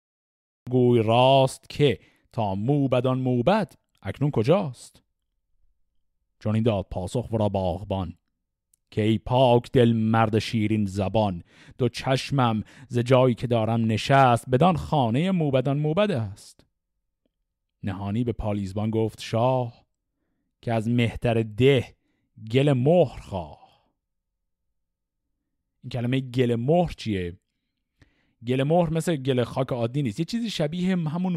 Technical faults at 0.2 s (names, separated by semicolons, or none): cut-off start